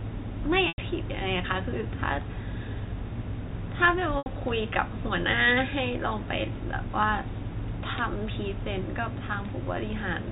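At 0.68 s and again at 4.18 s you get packet loss with pitch repetition: gaps of about 100 ms and 80 ms, each patched by looping the last pitch period and fading it, so the speech briefly holds as a buzzy tone before resuming over the telephone-band G.711 sound.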